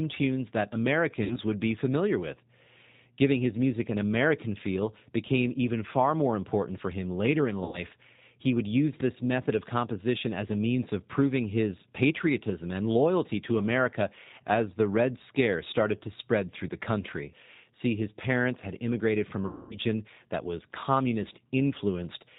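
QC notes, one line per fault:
Throughout: G.729 codec. The speech is carried at 8 kbit/s and rebuilt from a vocal tract filter, a pitch predictor and a few pulses per 5 ms half-frame. Nothing above 4 kHz comes through, so the sound is dull and band-limited. The damage is plainly audible. Voices sound slightly rough and synthetic because the excitation is only a coarse approximation.
1.24 to 1.39 s, 7.64 to 7.79 s and 19.46 to 19.79 s: VoIP packet loss concealed by the speech codec. Audio went missing for 60 ms, 90 ms and 240 ms, which fits losses of two, three and eight packets. The decoder filled each gap by repeating its last pitch and filter with falling gain. The gaps turn into a stretched, buzzy tone or coloured noise that fades away. The speech stays weak and distorted briefly after each gap, because every frame is built from the one before. The long gap at 19.46 s fades the most.
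9.00 s: uninitialised buffer. A tiny block of about 1.45 ms was played before any audio was written into it. Leftover memory was read out as samples. This fits a 64-sample block. It is heard as a loud crack.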